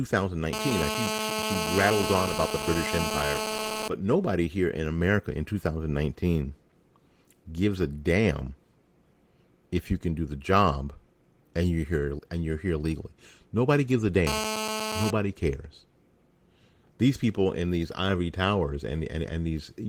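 From 0.53 to 3.88 s, just before "but nobody here in", and from 14.27 to 15.11 s, after "gives a", there is GSM phone buzz. A nearby handset's call bursts, about 217 per second, are rectified into the audio. It sounds like a steady, raspy 217 Hz buzz, only about 3 dB below the speech.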